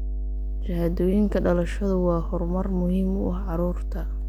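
Mains hum runs under the whole recording, from start to finish. It is a steady low tone at 50 Hz. A few low harmonics sit above it. The hum is strong, nearly as loud as the speech itself. It never fades or changes. The cause is power-line interference leaking into the signal path. A ground loop or a nearby transformer couples the supply frequency in, and it rides along with everything recorded.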